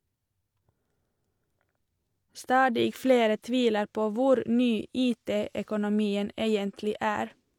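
No technical faults are audible.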